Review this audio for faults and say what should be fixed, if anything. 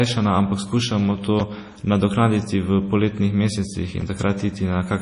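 MP3 compression, throughout: the speech has no treble above 10.5 kHz and a watery, swirly texture, likely from heavy encoding at around 32 kbps starving the frequency lines of bits.

Repeated buffer, at 1.40 s and 4.01 s: a brief buzz-like click where one 5.3 ms slice plays three times, which fits a 256-sample buffer being replayed.

To prevent these, keep an uncompressed or high-bitrate master and give the playback or capture path larger buffers or more scheduling headroom so new audio always arrives in time.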